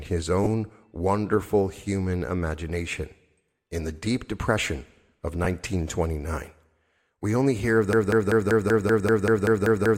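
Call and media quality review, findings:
Lost LE Audio frames, 0.44–0.47 s, just before "wonderful human imagination". About 22.5 ms of Bluetooth LE Audio missing, which fits three 7.5 ms frames. The LC3 decoder refilled the gap with the previous spectrum under random signs, giving a brief noisy smear.

Lost LE Audio frames, 5.44 s, right after "the deep depression of". A 15 ms gap consistent with two lost frames. Same concealment: last spectrum repeated with scrambled phase, heard as a short hissy blur.

Broken-record loop, 7.93 s to end, starting after "we only hear of". Stream stall, likely in player or encoder, resending its last buffered fragment. A 0.19 s piece repeats back to back about 11 times. Intended audio is lost.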